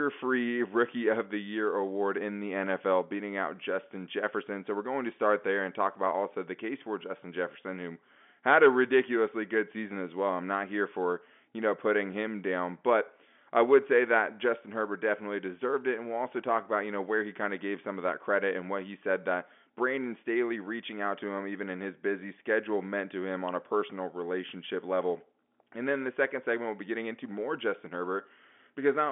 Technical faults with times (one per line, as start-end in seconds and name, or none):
none